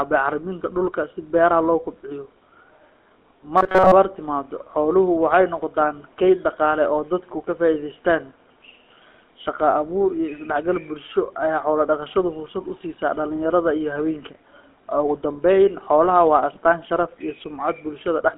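It's a speech recording that's been through the GSM full-rate codec for its whole length. You get that buzzy, gravelly roughness from the pulse-driven vocal tract model, and everything sits in a narrow phone band of roughly 250 Hz to 3.4 kHz, with nothing above about 4 kHz. That's consistent with the 13 kbps full-rate coder. Then from 3.58 to 3.92 s, right before "timaaddo xooluhu waxay", the voice turns into a rigid metallic buzz at 188 Hz. That's likely robotic sound from repeated short buffers: a chunk of roughly 5 ms gets replayed in place of most of the real audio there, which stamps that fixed pitch on it.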